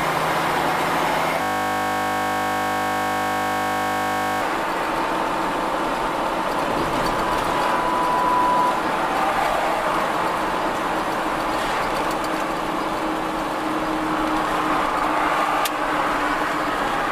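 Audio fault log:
1.42–4.41 s, system hang loop: the audio stops moving forward and a single 20 ms slice repeats back to back for about 3 seconds, roughly 150 times over. The host or driver stalled while the playback hardware kept reading the same ring buffer, which fits a buffer of around 20 ms. Because the segment is so short, the repetitions merge into a steady buzz at 50 Hz, the loop rate, instead of a distinct stutter.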